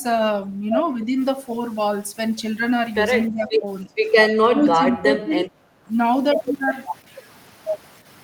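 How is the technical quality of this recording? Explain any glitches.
The recording has three audible faults in the speech: persistent grain, several dips in the talker's level, and one brief drop in the room sound.

From 1.16 s to the end, quiet parts of the speech turn gritty and grainy, and the distortion shifts with the sound. The noise sits roughly 30 dB below the signal. The likely cause is low bit depth without dither: the signal was truncated rather than dithered, which fits about 7 bits.

At 3.29 to 3.66 s, 3.84 to 3.95 s and 4.42 to 5.47 s, the talker's speech sinks by roughly 15 to 20 dB. The likely cause is speech suppressed in double talk. Both sides spoke at once, and the echo canceller pulled down the talker along with the loudspeaker echo.

At 5.77 to 5.88 s, the room sound briefly dips by about 10 dB and then recovers. This is background gated by the echo canceller: while the loudspeaker played, the canceller clamped down on the microphone and released it about a tenth of a second later.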